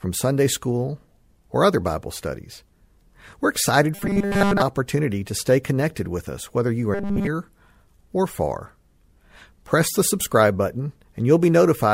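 From 3.95 to 4.61 s, and again from 6.94 to 7.27 s after "with us whether you", the speech turns into a rigid metallic buzz at 200 Hz. This is robotic sound from repeated short buffers, likely 5 ms of audio looped while fresh samples arrived too slowly. Most of the first span is repeated audio, and all of the second is.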